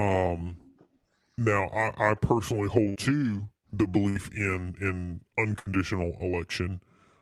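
A burst of packet loss occurs three times: at 2.89 to 2.98 s after "now I I personally", at 4.09 to 4.18 s after "to the", and at 5.59 to 5.69 s after "in in". Each time the receiver stretches the last sound for about 60 ms while fading it out. Playback then resumes with 60 ms of speech skipped.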